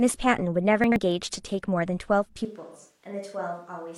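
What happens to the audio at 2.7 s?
At 2.7 s the sound is in the middle of an AAC frame loss with concealment, from 2.61 to 2.81 s. Audio data went missing, which fits three lost frames. The decoder patched the gap by reusing and scrambling the last good spectrum. The result is a brief smeared, noisy, phasey patch.

Underneath, a switch to a distant microphone began at 2.45 s and lasts to the end. The sound turns suddenly roomy and hollow, with less bass. It drops by about 10 dB and carries more background noise. The likely cause is the close microphone's signal failing.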